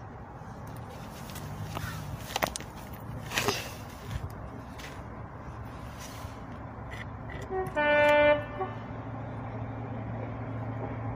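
No technical faults are audible.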